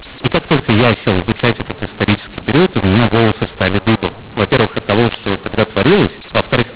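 From start to finish, a mu-law and A-law mix-up: the speech was encoded with the mu-law G.711 curve but decoded as A-law, so each 8-bit code maps to the wrong level. Loudness is scrambled, some samples too big, others too small, and near-silent samples are pushed well above zero. The speech sounds harsh and gritty, and pauses fill with noise. It all sits in a band ending near 4 kHz, which fits 8 kHz telephone coding.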